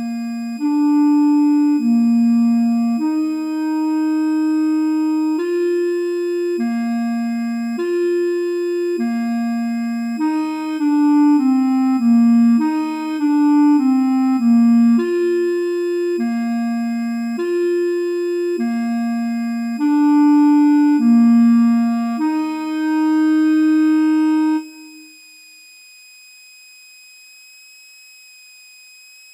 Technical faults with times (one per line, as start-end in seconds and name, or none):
0.00-29.33 switching supply whistle